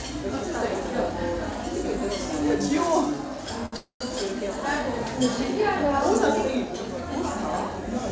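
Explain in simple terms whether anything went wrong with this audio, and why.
Just after 3.66 s, the sound sticks for a moment: it is held on slightly too long, with a faint buzz or dip, until 3.74 s. This is a short stall from a late packet. One piece of audio arrived late, so the receiving side briefly ran out of material and stretched the last bit of sound, about 65 ms, to cover the wait. When the piece arrived, playback carried on from the same spot, so nothing was lost.

Right after that, from 3.76 s to 4.02 s, the sound stops again for longer. It turns into a fading buzz or hiss and then goes quiet, with roughly the second half of the gap, about 120 ms, silent. Then the audio picks up where it left off. This is a call audio freeze, likely caused by a run of pieces being held up on their way across the network. The receiver kept up a fading imitation of the last sound to fill about 240 ms, so this stretch is a gap inserted into the audio rather than a piece cut out of it.

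These are the only two problems. The sound was carried over a call connection, which is why nothing above 8 kHz comes through.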